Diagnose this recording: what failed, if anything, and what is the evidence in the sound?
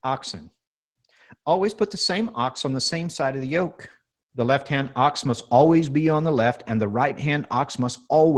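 Nothing failed here: the speech came through a call path whose top end stops around 12 kHz, which fits an Opus stream at roughly 20 kbps, and that's simply how such a link sounds rather than anything going wrong.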